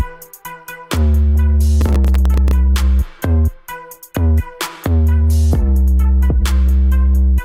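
From 1.81 to 2.51 s, the processor falls behind and misses the deadlines for about fifteen of its very short audio buffers, spread across that stretch. The gap lengths fit buffers of roughly a millisecond and a half. Each missed buffer drops out as a tiny hole of silence with abrupt edges, and together they form processor overload crackle, a gritty, tearing burst laid over the sound that ends when the load eases.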